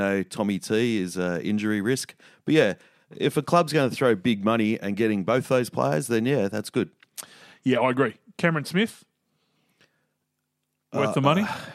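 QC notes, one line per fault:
No faults heard anywhere in this speech recording.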